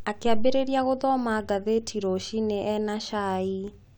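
Speech recording with no audible technical faults anywhere in it.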